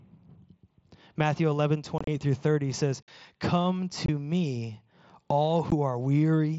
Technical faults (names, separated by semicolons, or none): unconcealed Bluetooth headset packet loss